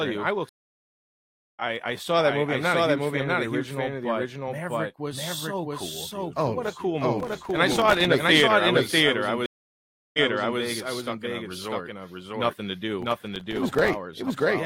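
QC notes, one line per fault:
Throughout: doubled audio track. A full-band copy sits about 0.7 s behind at roughly equal level, with no room tail. Likely a second capture path or a misaligned edit.
0.49 to 1.62 s and 9.46 to 10.61 s: stream reconnect. After "I will tell you" there's 1.08 s of silence, and it picks up around 0.7 s later at "I saw that movie". The second drop is 0.68 s of silence, then it restarts 0.47 s earlier, fading in on a fresh decoder.
7.20 to 8.05 s and 13.02 to 13.94 s: processor overload crackle. Gritty tearing after "what a cool" that clears by "great a theater I", then again after "a resort nothing to". Dozens of tiny silent gaps, which fits missed buffers of around 1.5 ms each.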